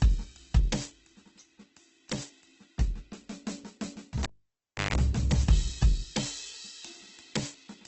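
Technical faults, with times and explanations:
Throughout, Opus compression: the music sounds rough, grainy and noisy rather than swirly, with tones smeared into hiss and nothing above about 8.1 kHz. This likely comes from Opus in its music (CELT) mode at a very low bitrate, around 12 kbps, filling starved bands with folded or noise content.
4.23 to 4.96 s, cable pulled and plugged in: a pop, then roughly 0.68 s of near silence broken by a short burst of 50 Hz mains buzz lasting about 0.16 s, then a second pop as the music returns. A live cable came out, its tip briefly touched and hummed, and it went back in.
5.49 s, dropped samples: a single sharp, thin click with no audible gap in the music. A tiny handful of samples, well under a millisecond's worth, is likely missing, so the waveform jumps abruptly from one value to a later one.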